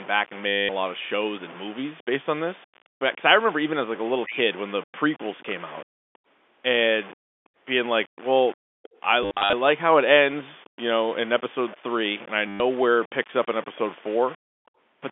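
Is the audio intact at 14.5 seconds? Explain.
No. Three faults overlap at 14.5 s.

Low bit depth without dither runs through the whole clip. The signal was likely rounded to about 6 bits with no dither, leaving grainy distortion around 20 dB below the speech that rises and falls with it and roughens quieter passages.

An echo leak runs from 13.75 to 14.7 s. A faint copy of the speech, around 30 dB down, trails it by 318 ms, most likely because the far end's echo canceller let some loudspeaker sound back through its microphone.

The background is gated by the echo canceller from 14.37 to 14.73 s. While the loudspeaker plays, the canceller suppresses the microphone, so room sound dips by as much as about 40 dB for roughly 300 ms in total and returns when the canceller releases.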